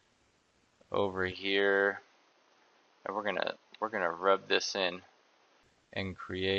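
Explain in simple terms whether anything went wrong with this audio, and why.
Something did go wrong, from about 1.32 to 5.63 seconds. The sound suddenly turns duller and a bit boxy, as if the top end was shaved off: nothing comes through above roughly 6.4 kHz. A faint new background noise comes in too. There's no gap at either change and the loudness stays about the same. This is most likely an input switched to a poorer device, the recording jumping to a lower-quality microphone partway through and then switching back.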